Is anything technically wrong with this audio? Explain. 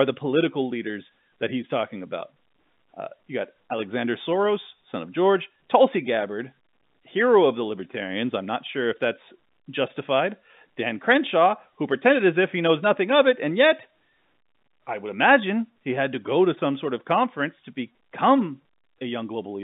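No, nothing is technically wrong with this audio.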